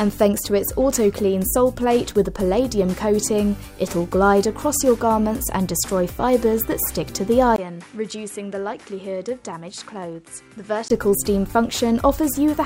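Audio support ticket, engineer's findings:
Dull, quieter 7.56–10.90 s after 20 ms gap; band ends at 11.4 kHz, level about 10 dB lower. Likely input switched to a poorer device.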